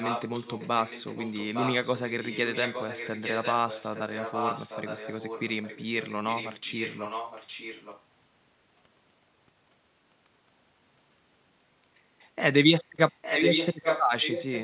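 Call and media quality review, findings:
Echo leak, 0.0 to 8.05 s and 13.1 to 14.6 s: a delayed copy of the speech returns about 0.86 s late, about 10 dB below the talker at first and near equal level at the end. Likely loudspeaker pickup the far-end echo canceller failed to remove.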